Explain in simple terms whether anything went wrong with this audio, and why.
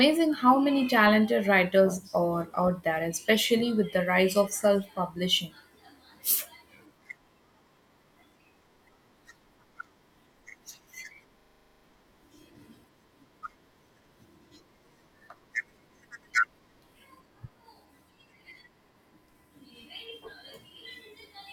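Something did go wrong: a system hang loop at 11.4 to 11.84 s. The computer briefly froze, but the sound hardware kept replaying the last chunk it held, a 40 ms slice, over and over, 11 times. Repeating that fast, 25 times a second, the slice fuses into a flat, machine-like buzz instead of speech, and nearly half a second of real audio never gets through.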